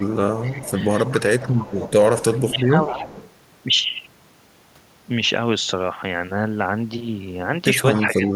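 An echo canceller on a loudspeaker end likely failed to remove all of its microphone pickup, so an echo leak runs from 0.0 to 3.3 s: a copy of the speech returns 261 ms late, about 15 dB below it. It comes back from 7.95 to 8.32 s, about 20 dB down. Where both sides talk at once, the canceller likely confused the talker with the echo and turned both down. This is speech suppressed in double talk. From 2.37 to 3.01 s the speech dips by up to about 10 dB, for roughly a third of a second in total. From 7.97 s to the end it drops by up to about 15 dB, again for roughly a third of a second.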